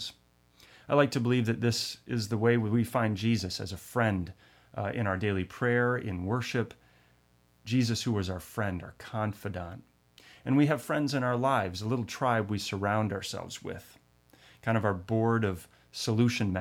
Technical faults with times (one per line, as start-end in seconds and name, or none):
0.00-16.61 mains buzz